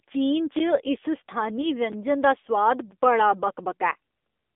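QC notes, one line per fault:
Throughout, AMR narrowband mobile codec: the speech is carried as a mobile call would be, band-limited to roughly 250 Hz to 3.6 kHz, and the low bit budget, fitting about 7.4 kbps, leaves the vocal-tract model audibly buzzy and synthetic, with nothing above 4 kHz.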